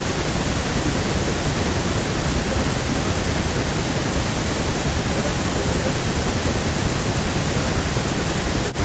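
At 4.83 to 4.94 s the speech drops by about 15 dB for roughly a tenth of a second. This is likely speech suppressed in double talk, where the echo canceller turned the near talker down along with the far-end echo. Unlike a packet-loss gap, the sound dims rather than vanishing or warbling.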